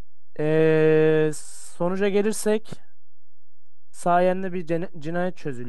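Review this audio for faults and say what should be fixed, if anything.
Nothing audible gives it away, yet a DC offset runs through the whole speech clip: the waveform sits shifted off zero by about -27 dBFS, a constant that eats headroom and appears as steady energy at 0 Hz. Removing it with a high-pass filter would fix it. Preventing it means high-pass filtering or DC-blocking at capture and checking the converter or preamp for a biased input.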